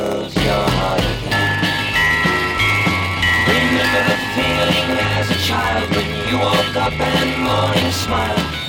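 A steady buzz around 93.8 Hz runs through the whole clip, and the audio plays back slightly slow, at about 0.938 times normal speed, with its pitch roughly intact. That's a block size mismatch (padded): each block arrives short, the remainder is zero-filled, and the buzz rate fits a 512-sample read buffer.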